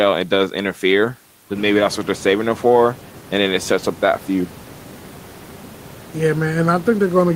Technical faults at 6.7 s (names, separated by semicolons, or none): none